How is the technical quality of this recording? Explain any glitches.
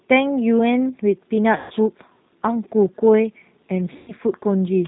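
Technical quality is limited: the speech has passed through a G.729 codec and has two packet-loss dropouts.

G.729 codec, throughout: the 8 kbit/s coder rebuilds speech from a few pulses per frame, sounding rough and synthetic. A spectrogram shows nothing above 4 kHz.

VoIP packet loss concealed by the speech codec, at 1.56–1.73 s and 3.98–4.12 s: the decoder extended the last pitch and filter through 140 ms and 100 ms gaps, producing fading buzzy tones or coloured noise. A waveform shows decaying envelopes with repetitive periods.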